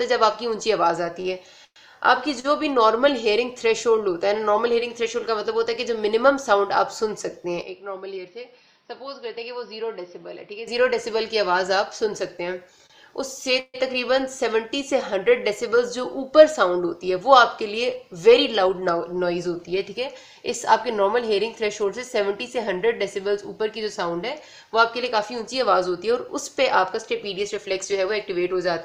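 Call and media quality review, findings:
Audio drags and stutters, 1.21–2.46 s: repeated stalls (stutter). Jitter buffer ran dry three times, longest gap 112 ms, 185 ms held over by concealment, nothing lost.

Sound turns dull and quieter, 7.62–10.68 s, nothing above 5.8 kHz, level down about 10 dB, new noise floor roughly 35 dB under signal, no gap at switch. Likely input switched to a poorer device.

Brief held sound with slight buzz or dip, 12.86–12.92 s: short stall from a late packet. Jitter buffer empty, last sound stretched 34 ms, playback resumed in place.

Fading buzz or hiss then 40 ms of silence, 13.60–13.76 s: 143 ms gap inserted, nothing missing. Likely call audio freeze, packets held up in transit and buffer emptied.

Audio runs faster at unchanged pitch, 15.67–18.82 s at 104% speed and 25.43–28.25 s at 103%: jitter buffer speed-up, pitch-period cuts trimming about 0.15 s and 0.1 s of excess delay.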